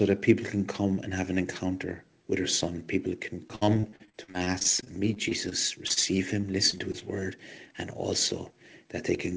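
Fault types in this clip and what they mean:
Repeated packet loss (robotic sound): the call keeps losing audio, and each hole gets papered over by stretching the last bit of sound, so it turns choppy. It runs from 3.48 to 6.05 s with about two dozen short dropouts, none longer than 58 ms, and roughly a fifth of that stretch is patched. A lighter burst follows from 6.41 to 7.03 s, all under a 20 ms hole, over a call path that stops at 8 kHz.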